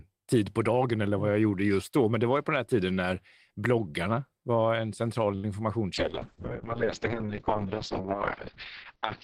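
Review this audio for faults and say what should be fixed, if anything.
Right after "bloggarna var en central", from 5.35 to 5.46 s, a sound is held unnaturally long with a faint buzz or dip. This is a short stall from a late packet: the jitter buffer ran dry, and the receiver stretched the last sound for 83 ms until the packet arrived, then resumed where it left off, so nothing is lost. A somewhat deeper jitter buffer, or faster adaptation to delay spikes, would absorb a late arrival like this.

From 5.94 s to the end, the speech turns rough and muffled, losing its top end. This is a call bitrate drop: the bandwidth estimate fell, and the encoder went from 32 kbps to 6 kbps, which cut the audio bandwidth from 20 kHz to 6 kHz and coarsened the coding. Smoother bandwidth estimation, with a higher bitrate floor for the encoder, would keep quality from collapsing this far.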